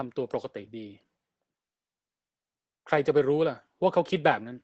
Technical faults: Opus voice compression

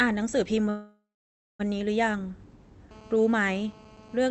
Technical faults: call audio freeze

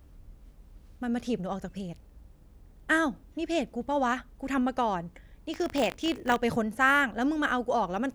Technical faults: buffer tearing

